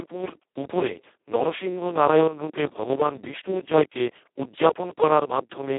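Speex codec damage runs throughout this speech clip, heavy enough that the voice sounds hoarse, noisy and close to robotic, which fits a very low bitrate of roughly 2 kbps starving the excitation. The band is narrow, about 250 Hz to 3.6 kHz, with nothing above 3.8 kHz.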